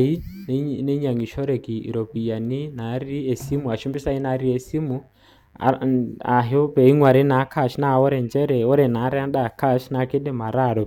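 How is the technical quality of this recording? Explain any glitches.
There's one problem here: a mains buzz sits under the speech for the whole clip. Sharp switching spikes from 50 Hz mains have leaked into the signal path, stacking harmonics up into the kilohertz range, so you hear a steady, raspy buzz roughly 40 dB below the voice.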